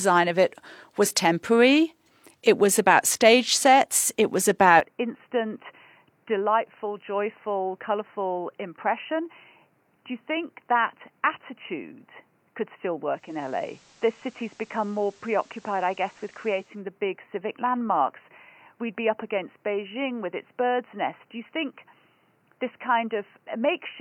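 At 4.80 s, right after "stage sets it was", the sound turns dull and boxy and stays that way to the end. The level drops by roughly 5 dB, and a new noise floor appears, around 40 dB below the signal. There is no gap at the change. This is likely an input switched to a poorer device, with the recording jumping to a narrower-band input partway through.

At 13.09 s, digital radio blending to analogue begins. The receiver loses its digital stream and cross-fades, over 344 ms, to the FM broadcast of the same station. Hiss rises to around 30 dB below the signal. The level shifts by about 1 dB. At 16.83 s the receiver blends back to digital and the hiss falls away.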